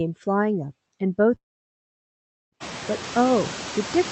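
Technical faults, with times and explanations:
Throughout: noise suppressor artifacts. The suppressor judges each band frame by frame and pulls down whatever it takes for steady noise, but here it removes only about 1 dB, so the effect is faint: a slight dip in the noise floor between phrases. On a spectrogram the background speckle looks faintly patchy rather than smooth, with small frame-to-frame changes in level below the speech energy, all under the Opus band edge at 8 kHz.
1.36 to 2.55 s: long network dropout. For about 1.2 s the audio simply stops, most likely because packets stopped arriving and the receiver had nothing to decode. The stretch is filled by concealment and then falls to near silence for most of its length, and that material is never recovered. When sound resumes, the part in between is missing. The waveform shows a flat, nearly empty gap. The spectrogram shows a blank vertical band across all frequencies, ending abruptly where the room noise and speech come back in around 2.5 s.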